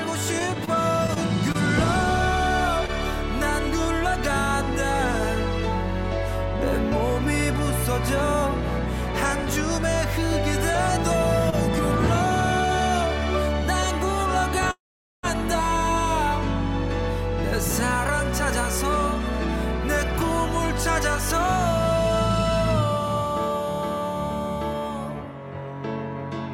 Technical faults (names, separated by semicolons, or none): scattered short gaps; short stall from a late packet; call audio freeze; jitter buffer speed-up